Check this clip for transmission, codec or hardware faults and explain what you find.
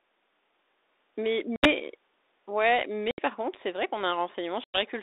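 Three short dropouts from packet loss on an ADPCM call break up this speech, at 1.56 to 1.71 s, 3.11 to 3.22 s and 4.64 to 4.80 s. Around 70, 70 and 100 ms of audio go missing, which suggests a small run of consecutive packets each time. The gaps fill with silence, and the decoder's adaptive predictor and step size lose track of the sender's. When the sound resumes it comes back slightly distorted, then settles within tens of milliseconds. That recovery tells it apart from a plain dropout or a noise gate, which would simply restart cleanly. The surrounding audio carries the band-limited 300 Hz to 3.7 kHz sound of G.726 ADPCM, consistent with the 32 kbit/s DECT mode.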